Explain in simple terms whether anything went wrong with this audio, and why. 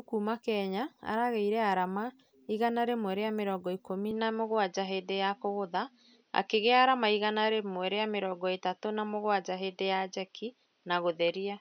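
Right after "rĩmwe rĩa mĩrongo ikũmi", at 4.11 s, the speech abruptly turns duller and boxier, with nothing above 6.1 kHz, a slightly shifted level and faint new background noise. There's no gap, and it lasts to the end. It's likely an input switched to a poorer device.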